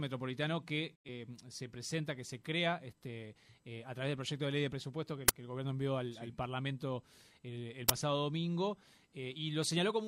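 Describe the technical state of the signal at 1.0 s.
A digital broadcast dropout runs from 0.94 to 1.09 s. The receiver stopped getting valid frames and muted, fading the sound to silence over about 20 ms, then brought it back. Roughly 85 ms of programme is gone, which fits two lost frames.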